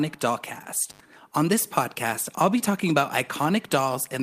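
Intermittent contact at 0.90 to 1.00 s. A loose plug or cable connection breaks for about 82 ms of that span, so the signal path briefly opens. The speech drops out with crackle at the edges of the break, leaving hiss while the line is open. The crackle comes from the contact scraping open and closed, and the gap in between is the moment the connection carries no signal at all.

Short concealed packet loss at 2.58 to 2.61 s, between "this podcast I'll be" and "talking about". About 10 ms of the call never reached the decoder in time, and the receiver covered the hole with roughly 12 ms of synthesised audio before blending back into the real signal. The fill either continues the last pitch or is shaped noise, depending on what came before. It is heard as a brief smear or wobble in the speech.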